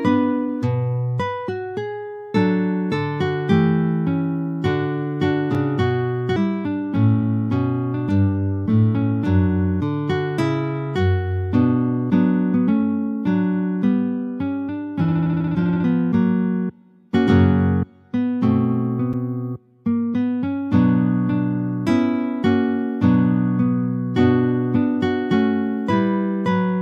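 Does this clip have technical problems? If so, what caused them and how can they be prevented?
Yes. There are two blocks of digital silence, at 5.55 s (about 3.8 ms) and at 19.13 s (about 6.1 ms). At each, the signal drops abruptly to zero and returns without any fade, and each gap sounds like a short tick. Such short zeroed blocks point to the output buffer not being filled in time. To prevent this, use larger buffers and give the audio thread higher priority so processing always finishes before each buffer is due.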